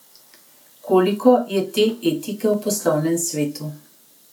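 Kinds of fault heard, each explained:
Clock drift buffer slips: The two devices in the chain are likely running on separate clocks that disagree by around 150 parts per million, so the buffer between them slowly creeps until a handful of samples is dropped or repeated to bring it back in line. In this speech, that shows as four clicks spaced about 1.08 s apart between 0.37 s and 3.62 s, keeping a steady rhythm that has nothing to do with the talking.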